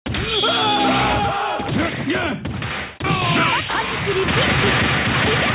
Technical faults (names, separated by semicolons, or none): none